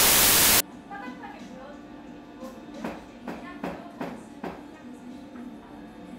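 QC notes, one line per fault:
0.00–0.60 s, file tags played as audio: an embedded cover picture's compressed bytes are read as samples, giving hard-edged, very loud white-noise static before the sound begins.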